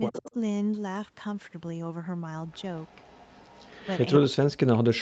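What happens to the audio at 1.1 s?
Nothing goes wrong at 1.1 s: the speech there is intact and continuous, with only the normal narrowing of the call path, which leaves nothing above 8 kHz.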